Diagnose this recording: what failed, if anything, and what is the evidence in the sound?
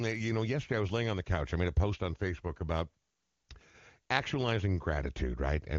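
Nothing in this speech recording stood out as a failure on careful listening, at any stage of the chain.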